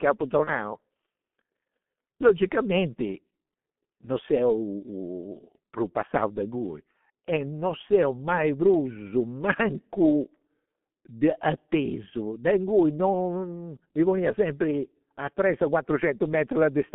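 A speech recording heard throughout through the G.723.1 codec. The sound sits in a telephone band of roughly 150 Hz to 3.4 kHz, and the heavy coding damage makes it muffled and hoarse, with smeared consonants. The very low bit rate, consistent with the 6.3 kbit/s mode, and the slowly updated 30 ms frame model cause this. Plain band-limiting would sound thin but clean. Here the roughness comes from the vocal model lagging behind the speech. From about 0.45 to 0.52 s there is VoIP packet loss concealed by the speech codec. Instead of a silent gap or a click, the decoder keeps extending the last pitch and spectral shape into a brief buzzy tone or coloured noise that fades, which fits a single lost 30 ms frame. Because each frame is built from the previous one, the sound stays weak or distorted just after the dropout before it recovers. A plain dropout or mute would not do that.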